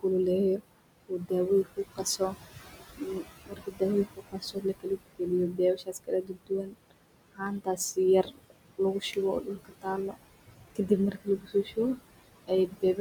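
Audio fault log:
throughout noise suppressor artifacts: The suppressor pulls the room noise, which sits about 13 dB under the speech, down by about 20 dB band by band, frame by frame. The residue sinks between phrases and rises under them.
0.58–1.31, 1.64–2.36, 2.98–6.93, 7.33–10.15, 10.53–12.07, 12.47–12.99 s speech cut by the noise suppressor: In each span the suppressor misreads brief stretches of soft speech as noise and drops them by about 18 to 22 dB. Consonants and word endings sound swallowed.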